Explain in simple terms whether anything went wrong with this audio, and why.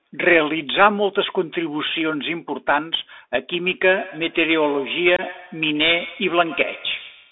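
A Bluetooth CVSD headset codec shapes the whole clip. This narrowband link passes only about 300 Hz to 3.6 kHz, so the speech sounds thin and muffled, and the codec's coarse up-or-down steps leave a plainly audible grainy, scratchy roughness over it.

Feedback echo between two devices starts at 3.86 s and runs to the end. Another device in the room replays the call, and this microphone picks that sound up again, so faint repeats trail the speech at roughly 150-millisecond intervals.

Unconcealed Bluetooth headset packet loss cuts a gap from 5.16 to 5.21 s. A few short voice packets between headset and phone never arrived, and nothing filled in for them, leaving a 22.5-millisecond hole with abrupt edges in the speech.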